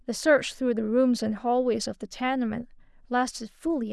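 No technical faults are audible.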